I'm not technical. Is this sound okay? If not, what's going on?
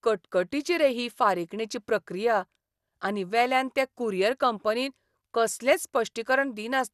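No. Throughout, the speech sounds dull and gurgly, with a grainy edge and nothing above 12.2 kHz. This is likely MP2 compression squeezing the sound too hard.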